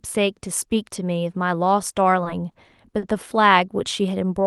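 At 2.23 s, 2.51 s and 2.98 s the speech briefly stalls. Each is a short stall from a late packet. The jitter buffer ran dry, so the receiver stretched the last sound until the data arrived. Nothing is lost. The holds last about 20, 30 and 40 ms, each longer than the one before. Each holds a sound slightly too long, with a faint buzz or dip. The call path's band, topping out near 12 kHz, stays steady throughout.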